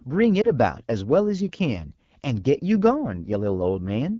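Throughout, the speech passes through the AMR wideband (HD Voice) codec at a low rate, which fits the 8.85 kbit/s mode. The coarse pulse-excited model leaves the speech plainly rough and raspy.

Between 0.42 and 0.50 s, a corrupted radio frame forces the decoder to conceal a lost AMR speech frame, consistent with a single 20 ms frame. It repeats stale parameters at reduced gain, causing a brief dip or warble.

From 2.95 s to the end, de-emphasis applied wrongly imposes a treble cut the audio never needed. The response falls smoothly to about 10 dB down at 10 kHz, leaving the speech dull and muffled.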